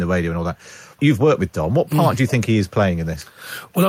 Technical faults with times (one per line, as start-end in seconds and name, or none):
2.27-2.32 echo leak